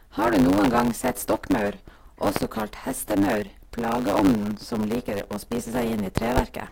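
A block size mismatch, truncated type, runs through the whole speech clip. One stage hands over longer blocks than the next stage takes in. The tail of each block is discarded. Each cut leaves a small break, and these repeat 100 times a second. The result is a steady 100 Hz buzz under the speech. Because material is dropped, the speech runs about 1.09 times too fast. The pitch stays close to normal.

Loud pops cut through the speech at four points. The first is a single pop at 0.64 s. A double pop follows at 2.36 to 2.44 s. Another single pop lands at 4.19 s. A final double pop spans 6.18 to 6.41 s. Each peaks at about 20 dB above the speech, which continues underneath. The likely cause is a sudden voltage step or pulse, such as a switch, static or a driver glitch.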